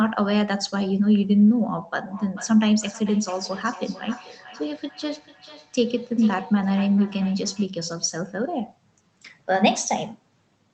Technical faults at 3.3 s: feedback echo between two devices

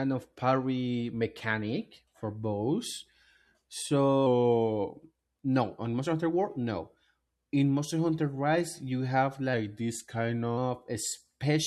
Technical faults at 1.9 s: none

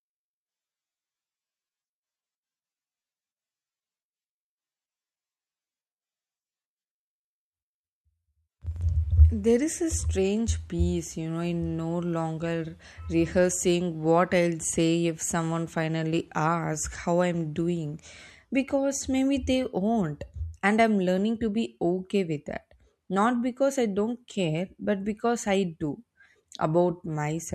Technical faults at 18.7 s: none

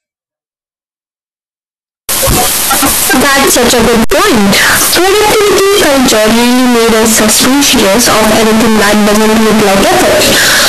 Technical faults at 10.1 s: float read as integer

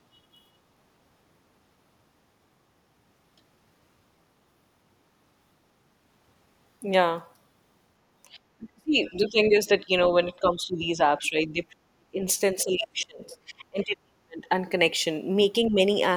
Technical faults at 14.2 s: speech suppressed in double talk

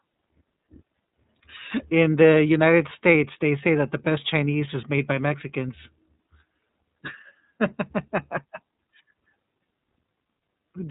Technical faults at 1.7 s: iLBC codec

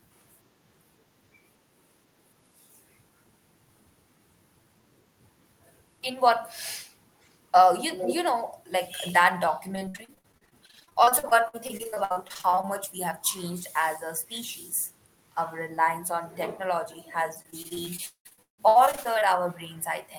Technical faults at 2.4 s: none

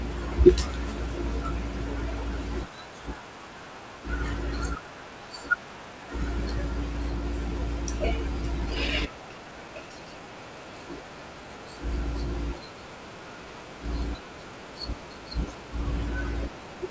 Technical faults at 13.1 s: none

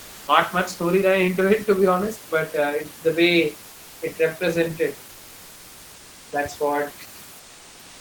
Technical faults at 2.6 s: none

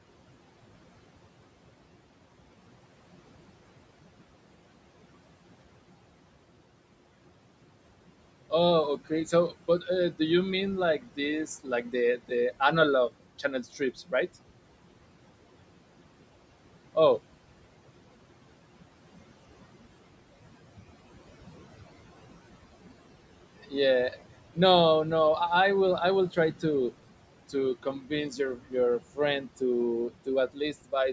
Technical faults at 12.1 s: noise suppressor artifacts; speech cut by the noise suppressor

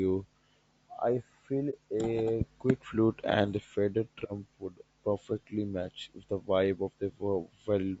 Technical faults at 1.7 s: low-delay AAC compression; AAC frame loss with muting

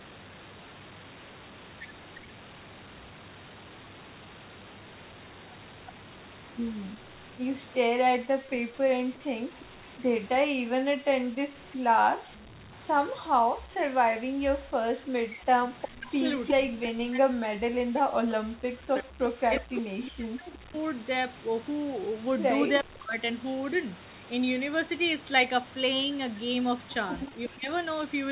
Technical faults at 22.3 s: speech suppressed in double talk

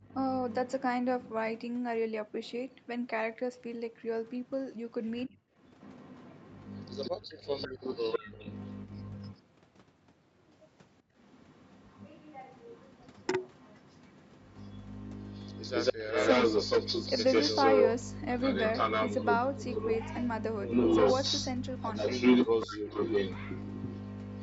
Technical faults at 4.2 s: echo leak

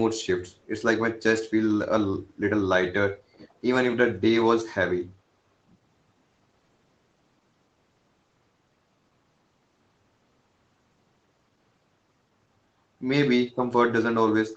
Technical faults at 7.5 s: none

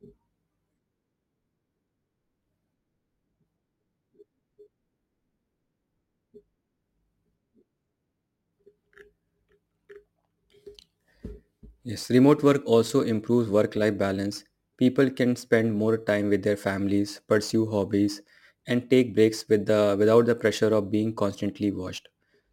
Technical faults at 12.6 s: crude rate conversion

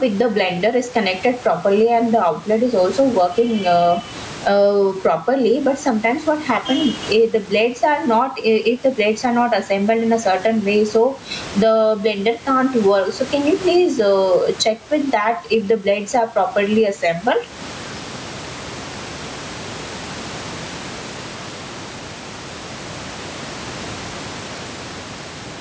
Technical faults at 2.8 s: gain pumping

